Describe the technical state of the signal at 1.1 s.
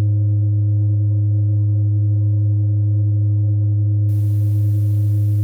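Nothing is wrong with the music at 1.1 s; the signal there is intact, with no audible fault.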